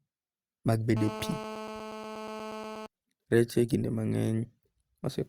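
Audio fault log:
0.97 to 2.86 s, GSM phone buzz: a hard, raspy buzz sits under the speech for just under two seconds, pitched at about 217 Hz with a whole stack of harmonics above it. A 2G handset close by was on a call, firing radio bursts 217 times a second, and the audio circuitry rectified those pulses into the signal. Since it's a call, the buzz holds steady throughout, sitting about 11 dB below the speech and completely unrelated to it.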